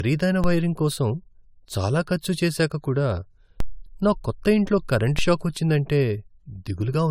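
Generation loss runs from start to finish. The speech sounds swirly, hollow and smeared, and its consonant attacks blur more than one lossy pass would cause. That is likely from several rounds of AAC-LC re-encoding, perhaps four, at a rate near 96 kbit/s, each re-quantising on a shifted frame grid.

A DC step occurs at 0.44 s, 3.60 s and 5.19 s. At each, the waveform's zero line jumps suddenly to a new offset and then drains away slowly through a roughly 2 Hz high-pass. Each jump is heard as a low thump under the speech, which carries on unaffected.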